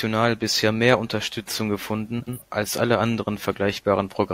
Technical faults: frames out of order

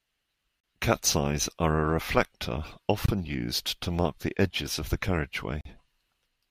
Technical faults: gap at a join of encoded pieces

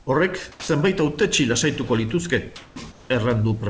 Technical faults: sound dropped by the voice detector; comfort noise in place of the background

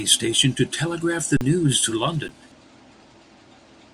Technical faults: underrun with held sample; channel delay (comb filtering)

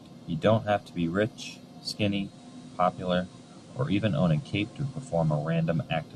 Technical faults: digital radio blending to analogue

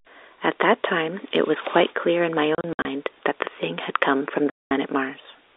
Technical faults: packet loss filled with silence

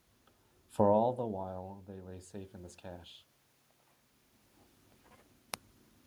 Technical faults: automatic gain rising

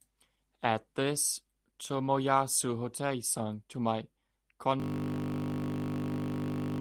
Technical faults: system hang loop

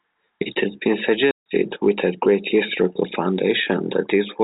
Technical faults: packet loss filled with silence

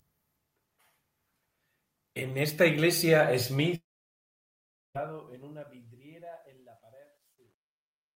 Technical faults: truncation distortion on a fade; long network dropout

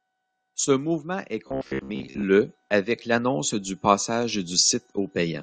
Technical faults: robotic sound from repeated short buffers

